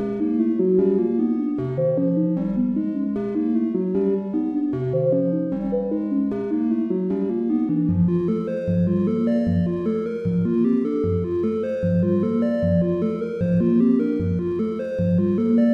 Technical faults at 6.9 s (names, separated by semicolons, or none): none